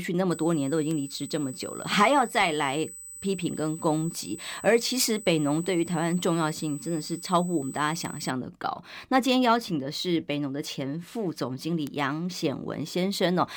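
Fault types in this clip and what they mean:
USB whine: A steady, fixed-pitch tone at 8 kHz, about 15 dB below the speech, runs from 0.31 s to 8.31 s. It comes from the USB bus drawing current in 125-microsecond microframes, which leaks into the audio through the power or ground. Unlike acoustic feedback or a resonance, its pitch never moves with the speech, and unlike mains hum it sits high in the treble, far above any 50 or 60 Hz series.
bit error spike: Three isolated, sharp ticks at 0.91 s, 8.05 s and 11.87 s, each lasting only a couple of samples. A single flipped bit in memory or on a digital link makes the sample value jump by a power of two and snap straight back, so the click spreads across the whole spectrum. Vinyl crackle or dropouts come in clusters or leave gaps, but each of these ticks is a lone, instantaneous event with no link to the speech.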